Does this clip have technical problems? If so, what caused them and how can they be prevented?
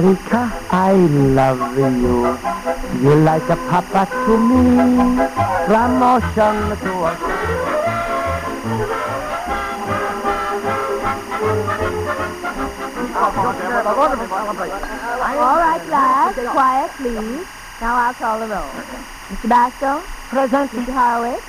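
Yes: there's timecode bleed the whole way through, a steady chirping warble around 1 and 2 kHz sitting roughly 20 dB under the sound. That's linear timecode at 23.976 frames per second leaking in from a neighbouring track or cable. Keep timecode lines physically separated and well shielded from audio runs.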